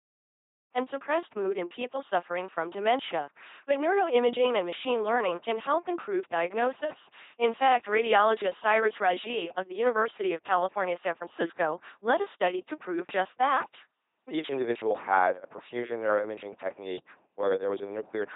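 From the start, after a brief fade-in ending at 0.74 s, the speech carries heavy LPC-10 vocoder damage: a buzzing robotic voice where each moment is either pulse-driven buzz or pure hiss, with nothing above 3.8 kHz, which fits a 2.4 kbit/s rate. Unlike noisier codec warble, voiced sounds lose all natural breathiness.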